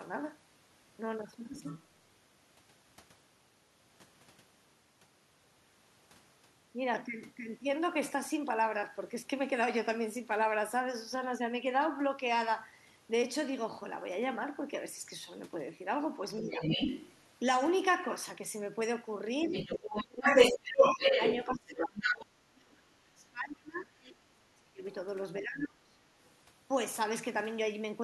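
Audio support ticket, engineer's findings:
Other side's voice leaking through: far-end talk audible at 1.59–1.83 s (about 15 dB under), 16.5–17.13 s (about level), 19.44–22.25 s (about 5 dB over), 24.03–24.94 s (about 25 dB under), 26.25–26.29 s (about 40 dB under). Likely echo canceller leaving loudspeaker residue in the mic.

Speech suppressed in double talk: shallow dip of about 5 dB at 16.39–16.59 s, then heavy ducking of about 30 dB across 19.48–25.97 s, roughly 4 s of it, while the far end talks. Likely canceller couldn't split near talker from echo, so it turned both down.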